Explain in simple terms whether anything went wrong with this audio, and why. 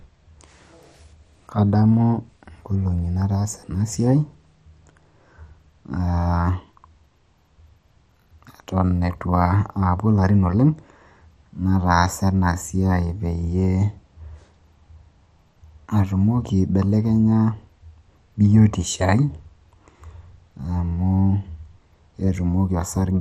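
The speech was likely squeezed hard by MP2 compression, which splits sound into narrow frequency slices and switches off the ones it can't afford. For the whole clip nothing above 14.2 kHz survives, so it sounds dull, with a clearly audible gurgling, grainy roughness.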